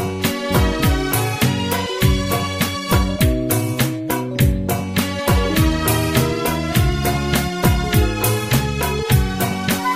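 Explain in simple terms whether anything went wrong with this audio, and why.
Nothing went wrong here as far as listening can tell: from the first moment to the last there are no dropouts, glitches or odd noises along the way.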